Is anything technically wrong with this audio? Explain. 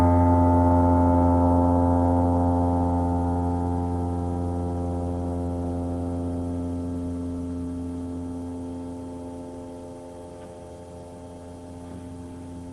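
No, nothing technically wrong is audible anywhere in this audio.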